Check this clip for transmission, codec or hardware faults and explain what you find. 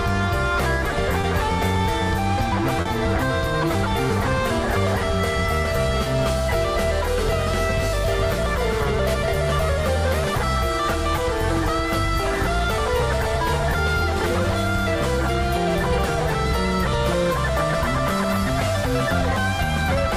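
The clip has one transmission fault: short concealed packet loss, occurring three times. At 1.21 to 1.25 s and 6.04 to 6.08 s about 20 ms of audio went missing, and at 2.81 to 2.87 s about 40 ms. In each gap the data arrived too late or not at all, so the receiver's decoder extended the preceding sound, either by repeating its pitch or by generating shaped noise, then crossfaded back into the real audio. Each event is audible as a brief smear or wobble.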